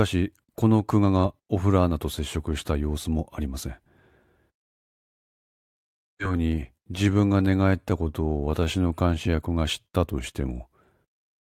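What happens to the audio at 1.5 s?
Nothing goes wrong at 1.5 s: the speech there plays through intact, with no dropout, click or other fault.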